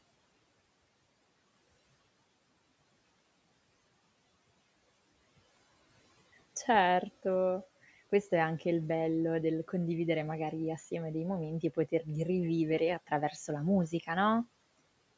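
Between 11.62 and 12.08 s, the noise suppressor mistook part of the speech for background noise and pulled it down with the room noise, by up to about 16 dB. Speech was cut by the noise suppressor for roughly 150 ms in all, leaving soft consonants and endings swallowed and faint.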